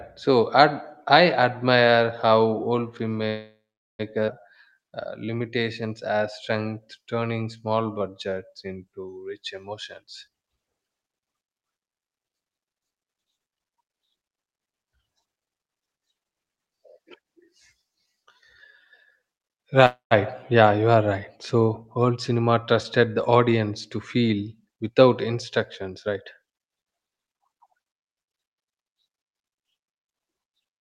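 At 3.27 s there's a call audio freeze that runs to 4.01 s. The sound that was playing stretches into a buzzy tail that dies away, and about 0.4 s of it is plain silence before things pick up exactly where they left off. That's a 717 ms hole pushed into the stream with nothing lost, most likely packets stalling in transit until the jitter buffer ran dry.

Right after, at 4.27 to 4.30 s, comes a skip ahead. Playback lurches forward with only a 5 ms seam, and roughly half a second of audio is simply gone. The two sides are butted together almost directly. It reads as the receiver dumping backed-up audio to claw back the delay the freeze had just added.

From 4.50 to 9.62 s the jitter buffer slow-down kicks in. The receiver repeats single pitch periods and bits of pauses over and over to rebuild its reserve, so the audio plays at 90% speed with the pitch unchanged. Sounds get drawn out, and across those five seconds it pads in 502 ms.

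Then from 9.69 to 13.82 s a jitter buffer speed-up swings the other way. Short pitch-period slices are trimmed repeatedly, pushing playback to 117% speed at the same pitch. It sounds noticeably hurried, with roughly 0.7 s shaved off in total. A second speed-up from 22.99 to 26.41 s is much gentler, at 102%. Only about 70 ms is trimmed there, so the rush is barely perceptible.

A second call audio freeze hits at 19.86 s and lasts to 20.13 s. It has the same fading tail and about 130 ms of silence, and it drops 251 ms of gap into the stream with nothing missing once the audio resumes.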